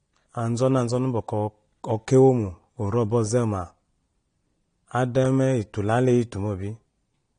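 Throughout, the speech was likely encoded with AAC-LC compression at a low bitrate, fitting about 32 kbps. The encoder cut everything above 9.8 kHz and coarsely quantised the rest, leaving plainly audible dull, smeared speech with a warbling, fizzy edge on sibilants.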